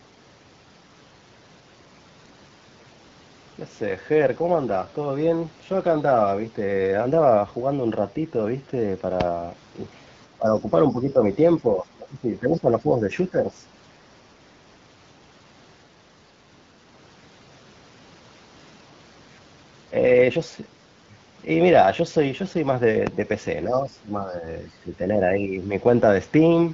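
A sharp loud pop cuts in at 9.21 to 9.24 s, and another at 23.07 to 23.11 s. Each is a single hit about 20 dB above the speech, which carries on underneath. Each is likely a voltage step from a plug, switch, static or driver glitch entering the signal.

From 10.32 to 10.69 s, 10.92 to 11.19 s, 11.61 to 13.13 s, 13.3 to 13.53 s and again 23.67 to 24.46 s, the talker dips in patches, by roughly 5 to 15 dB at the deepest. This is speech suppressed in double talk: the echo canceller likely could not separate the talker from the far side's echo while both spoke, and turned everything down.

Within the first of those dips, at 10.47 to 10.52 s, a brief faint scrap of the other side's voice leaking through appears, around 30 dB below the speech. It is likely loudspeaker echo the canceller failed to remove.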